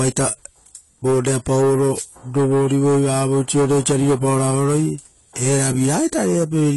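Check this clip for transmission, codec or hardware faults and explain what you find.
There's AAC compression running right through this speech: nothing above about 11.5 kHz, and a dull, swirly texture, likely from low-bitrate AAC-LC quantising its spectrum coarsely.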